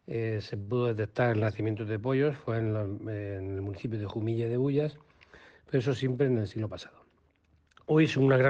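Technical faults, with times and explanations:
0.61–0.70 s, short stall from a late packet: a packet arrived late and the jitter buffer ran dry, so the receiver stretched the last sound for about 60 ms until it came. Nothing is lost, but the sound hangs briefly with a faint buzz or dip, and playback is now 60 ms later.
6.36–6.79 s, jitter buffer speed-up: with surplus audio queued, the receiver trimmed short pitch-period pieces over and over, removing around 70 ms in total. Playback runs at 115% speed without a pitch change, so the passage sounds briefly hurried.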